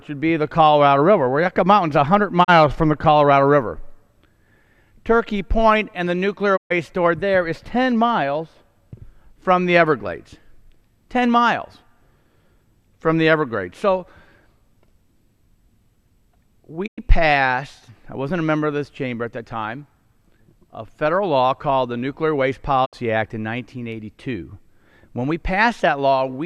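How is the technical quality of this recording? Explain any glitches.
The recording is interrupted by four brief digital broadcast dropouts.

At 2.43 to 2.50 s, 6.56 to 6.72 s, 16.86 to 17.00 s and 22.84 to 22.95 s, the sound fades out over about 20 ms into short silences of 32, 128, 96 and 64 ms, then resumes further along. Each gap is a whole multiple of 32 ms, which suggests lost or corrupted broadcast frames. The receiver muted through each gap, so that audio is gone.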